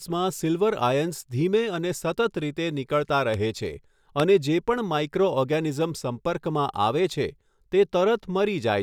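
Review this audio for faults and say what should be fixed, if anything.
Two loud pops sit on the speech, at 3.34 s and 4.20 s, each a single sharp hit. The second peaks around 15 dB above the speech, the first around 10 dB. The likely cause is a voltage spike from a connector or switch. Secure and ground cables.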